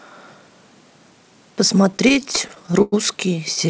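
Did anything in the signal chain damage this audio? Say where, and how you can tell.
Yes. Repeated stalls (stutter) from 1.92 to 2.94 s, at the network and jitter-buffer stage: over a dozen short holds, the longest about 0.1 s, drag the sound as late packets left the buffer empty and the receiver stretched the last sound, fading it, until audio resumed.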